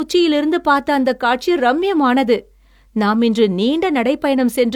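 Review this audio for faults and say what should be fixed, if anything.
Throughout the speech, low-bitrate coding damage persists, with nothing above 20.4 kHz, despite a high-bitrate container. This is likely low-bitrate audio saved at a high bitrate: an HE-AAC stream near 48 kbit/s re-encoded as roughly 192 kbit/s MP3, which preserves the earlier losses without restoring anything. To prevent it, encode from the original uncompressed source rather than from an already compressed copy.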